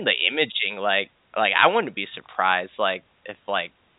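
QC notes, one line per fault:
Nothing to flag here, just speech carried over G.711 telephone coding, with the usual landline band that stops at 3.8 kHz.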